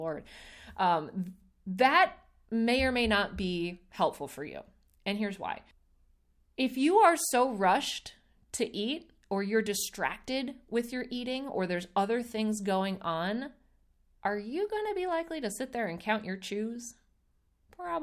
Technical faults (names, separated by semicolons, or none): none